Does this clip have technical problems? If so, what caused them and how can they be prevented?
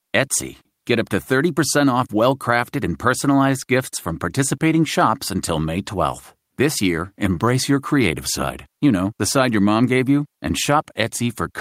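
No, no technical faults are audible.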